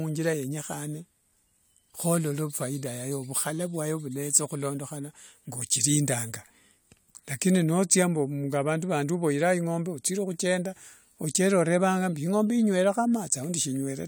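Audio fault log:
No technical faults can be heard anywhere in this speech recording.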